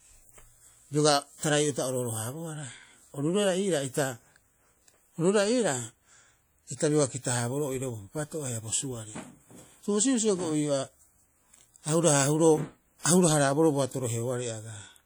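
WMA compression runs through the whole speech clip, and the audible damage is plain from start to finish. A transform codec of this kind, likely Windows Media Audio at a rate that fits around 48 kbps, quantises long blocks of the signal coarsely, so noise smears over tens of milliseconds around each sound and faint spectral detail drops out. The result is a ringing, washy texture with hiss that swells and fades with the speech, even though content still reaches about 20.1 kHz.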